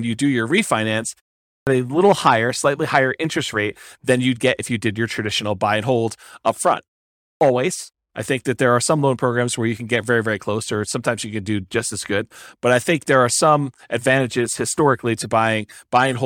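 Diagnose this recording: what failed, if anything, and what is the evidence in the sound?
The playback device is clipping the start after a pause. At 1.44 to 1.67 s, after a 0.32 s gap following "you do your refinance", about 230 ms is swallowed before "a little higher slightly" bursts in with no onset. It happens again at 7.19 to 7.41 s, where roughly 220 ms vanishes after "and hold up front" and a 0.39 s gap. The output sleeps through the short silence and takes that long to wake and relock.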